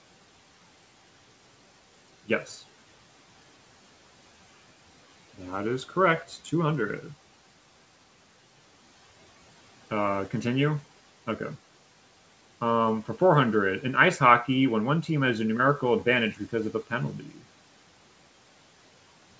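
At 17.19 to 17.45 s the speech is cut by the noise suppressor. It mistakes a soft stretch of speech for background and pulls it down by as much as about 11 dB. For roughly a fifth of a second the sound turns faint and swallowed against the room noise, which sits about 24 dB below the speech.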